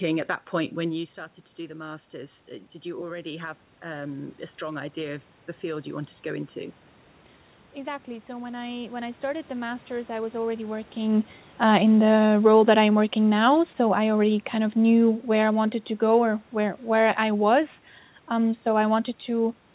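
From 0.92 to 6.84 s the speech drops by about 13 dB as the talker moves away from the microphone around 1 s. The automatic gain rising response gradually adds about 7 dB, and the voice and room noise swell together. From 7.74 to 10.81 s the gain climbs again by about 5 dB, with the background rising alongside the voice.

From 11.64 to 16.36 s, after the talker moves around 11 s, the automatic gain falling response lowers the gain by about 5 dB. The speech starts loud and then sinks steadily, with the background noise fading at the same rate.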